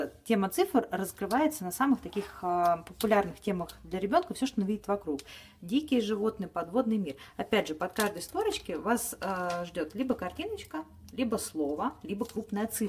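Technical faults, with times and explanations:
No technical faults are found, with no times or explanations to give.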